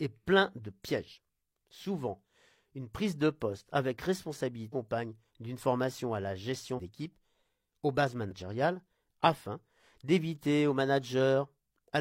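At 4.69, 6.74 s (after "d'une formation à la") and 8.27 s (after "aux bases"), compressed frames skipped: missing frames make the audio jump ahead about half, a third and a tenth of a second. Each join is seen as an abrupt break in the waveform and spectrogram.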